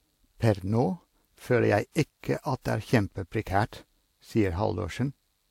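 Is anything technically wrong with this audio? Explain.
Yes. Throughout the speech, the audio was likely passed through transcoding between lossy codecs, and it points to Vorbis near 68 kbit/s re-encoded as WMA 1 near 96 kbit/s. WMA wastes bits on Vorbis's artefacts and adds its own, so both smearings mix, with nothing above 16.6 kHz.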